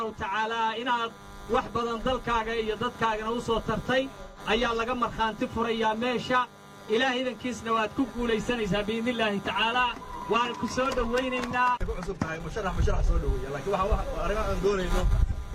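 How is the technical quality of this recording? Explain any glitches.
Two brief glitches come from AAC frame loss with concealment. The first runs from 4.23 to 4.39 s, about 128 ms, which fits three lost frames in a row. The second is shorter, 12.94 to 13.00 s, about 43 ms, consistent with a single lost frame. In each gap the decoder had no data, so it rebuilt the sound from the last good spectrum. Each patch sounds like a smeared, noisy or phasey patch, losing its clear detail until real data resumes.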